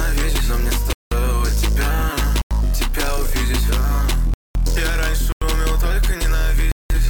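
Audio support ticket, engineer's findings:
Blocks of digital silence, five dropouts: 0.93–1.12 s (186 ms), 2.42–2.51 s (93 ms), 4.34–4.55 s (214 ms), 5.32–5.42 s (93 ms), 6.72–6.90 s (186 ms). Hard cut to silence and back, short holes in the sound. The 93 and 186 ms lengths fit whole 4096- and 8192-sample buffers being missed, so the output side isn't getting buffers filled in time. Check the render thread or the buffer handoff.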